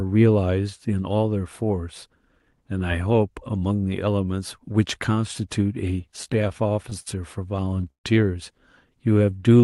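From 6.01 to 7.08 s and again from 7.56 to 8.06 s the speech hits repeated stalls (stutter): packets arrived late, the jitter buffer kept running dry, and the receiver stretched the last sound to cover each gap. Nothing is lost, but the speech drags and hiccups. The gaps are brief in the first stretch, at most 68 ms, and longer in the second, up to 134 ms and covering about a third of it. Then from 9.08 to 9.62 s there's a jitter buffer slow-down, where the receiver rebuilt its reserve by repeating pitch periods. That adds 96 ms and runs the speech at 84% speed with the pitch unchanged, so it sounds drawn out. Throughout, the Opus call path tops out around 12 kHz.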